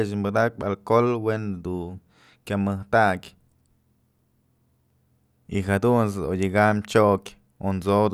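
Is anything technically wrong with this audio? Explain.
No, nothing technically wrong is audible anywhere in this speech recording.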